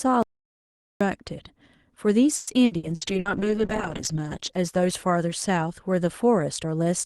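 At 0.23 s the speech cuts out to total silence. There is no room tone at all. It returns at 1.01 s, so about 0.78 s of speech is gone. This audio dropout to silence was likely caused by the input being lost while the recorder kept writing silence.

From 2.35 to 3.28 s comes repeated packet loss with a robotic sound. Five gaps break the speech, the longest 120 ms. Each gap is patched by stretching the last sound. About 39% of this stretch is patched, giving a choppy texture.

At 2.9 s a call bitrate drop begins, overlapping the end of that choppy stretch. The Opus call path has been carrying audio up to 12 kHz. The speech now turns coarse and watery, and the top end dulls. That fits the encoder falling from 32 to about 9 kbps. The lowest quality lasts about 1.2 s. The speech recovers by 5.47 s.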